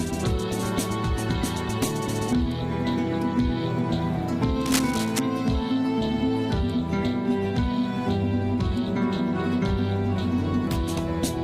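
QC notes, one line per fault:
4.66–5.21 s, cable scratch noise: likely a worn cable or connector being moved, its shifting contact adding dense uneven scratchy bursts nearly as loud as the sound.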